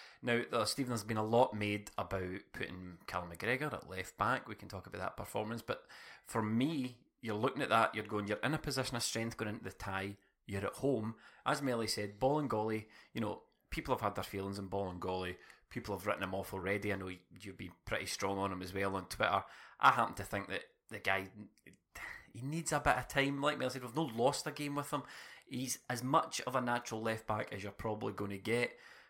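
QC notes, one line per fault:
8.96–9.57 s, drift correction step: the speech suddenly runs about 6% fast and rises roughly a semitone (101 cents), then drops back to normal.
14.84–15.83 s, drift correction step: the opposite move, about 6% slow and down 107 cents, before snapping back.
25.62–26.91 s, drift correction step: 6% fast and up 101 cents again. Speed and pitch jump together and then snap back, which points to a clock-matching resampler likely stepping its rate to refill or drain a buffer.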